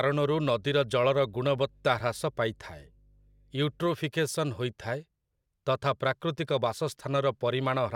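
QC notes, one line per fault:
0.0–3.89 s, mains hum: a steady 50 Hz tone with low harmonics, roughly 30 dB under the speech, from power-line coupling through a ground loop or nearby transformer.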